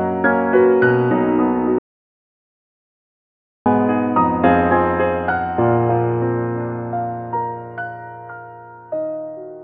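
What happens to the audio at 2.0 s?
At 2.0 s you're inside an audio dropout to silence running from about 1.79 s to 3.66 s, roughly 1.87 s of dead air. The music cuts out abruptly into silence with no room tone, then snaps back. The input likely dropped while the recorder kept writing zeros.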